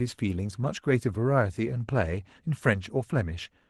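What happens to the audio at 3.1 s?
Nothing goes wrong at 3.1 s: the speech passes intact through the call path, with the band limit at about 12 kHz that fits an Opus codec at a modest bitrate.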